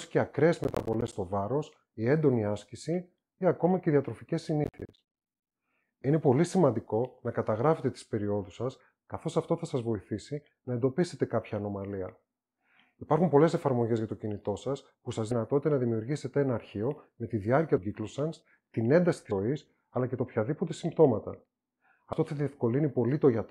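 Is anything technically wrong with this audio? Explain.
Yes, there are two kinds of fault.

Processor overload crackle occurs from 0.64 to 1.13 s and again from 4.64 to 5.52 s. The processor falls behind and misses a run of buffer deadlines, and each miss is filled with silence. The gaps are short, which fits buffers of around 10 ms. Runs of hard-edged dropouts in quick succession are heard as a gritty, tearing crackle over the sound. The second burst is longer and denser, and both stop once the load eases.

Compressed frames skipped occurs at 15.31, 17.78, 19.31 and 22.13 s. Whole frames of the encoded stream never reach playback, so the audio jumps forward. The jumps come in steps that fit a 32 ms frame length. About a third of a second is lost at 15.31 s, roughly 0.15 s at each of the next two, and about 70 ms at 22.13 s.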